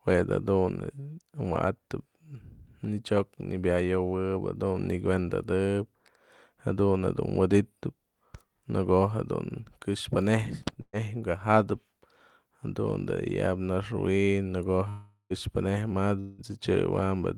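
A burst of packet loss hits at 10.81 to 10.96 s. Several consecutive packets never arrived in time, so the receiver stretched the last speech sound for about 116 ms, fading it into a brief silence, then resumed with roughly 120 ms of speech gone.

A long network dropout is the likely cause of the gaps at 14.89 to 15.33 s and 16.20 to 16.41 s. In the first, the final sound is held and fades over about 0.41 s, followed by silence, and about 0.42 s of speech is lost. In the second, about 0.18 s is missing and the concealed tail runs straight back into speech with no silent gap.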